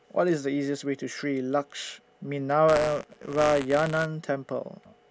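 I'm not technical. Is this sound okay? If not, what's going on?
No. From 2.68 to 4.06 s the speech carries a steady robotic buzz at 125 Hz, which fits a 128-sample buffer. This is buffer tearing: playback and writing have drifted, so each buffer slips in a small sliver of audio from a fraction of a second earlier.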